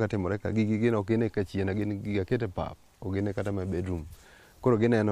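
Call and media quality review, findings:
No audible faults found.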